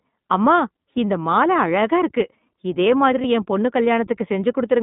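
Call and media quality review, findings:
iLBC codec, throughout. Band limited to 150 Hz to 3.7 kHz, plainly audible roughness and synthetic edge on speech. Each frame's excitation coded independently; the 20 ms framing fits the 15.2 kbps iLBC mode. Probable component: narrowband VoIP codec path.

Lost iLBC frames, 3.22 to 3.25 s, between "மால அழகா இருக்கு இதே" and "என் பொண்ணு". Brief held, buzzy vowel-like fill, about 20 ms, fitting one lost frame. Decoder repeated the last pitch cycle mixed with noise; recovery immediate because frames stand alone.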